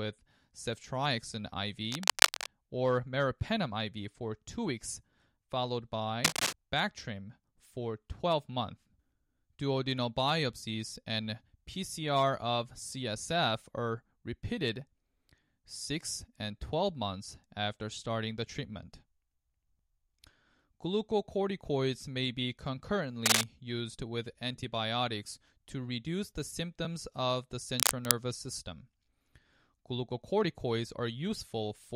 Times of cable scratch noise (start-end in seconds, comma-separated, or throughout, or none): 1.92-2.50, 6.24-6.53, 23.26-23.44, 27.79-28.14